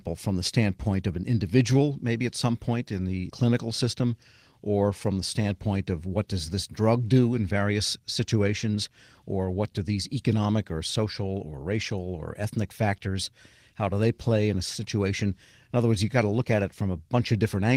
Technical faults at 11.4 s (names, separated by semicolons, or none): none